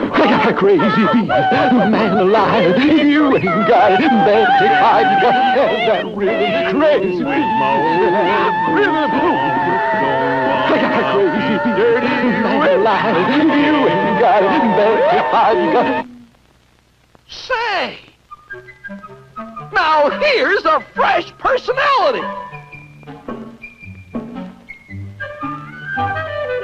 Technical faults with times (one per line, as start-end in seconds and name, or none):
none